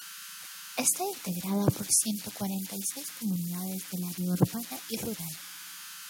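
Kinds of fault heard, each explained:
Converter idle tones: a whistle around 1.5 kHz sits in the pauses of this speech, turning to grainy noise beneath quieter passages, about 11 dB below the signal. An undithered delta-sigma converter falls into repeating bit patterns on small inputs, generating these tones.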